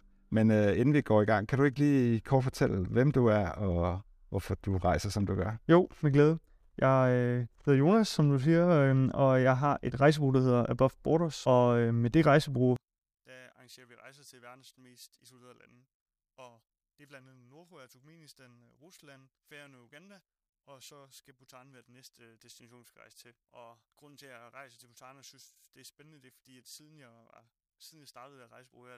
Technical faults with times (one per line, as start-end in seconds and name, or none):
12.76-28.97 one channel inverted